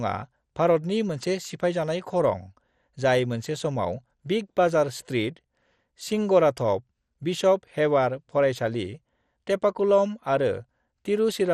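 Speech with dull, gurgling, granular distortion throughout and nothing above 14.2 kHz. This points to likely MP2 compression, fitting a low bitrate near 64 kbps.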